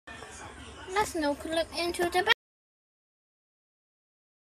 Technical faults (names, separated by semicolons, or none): audio dropout to silence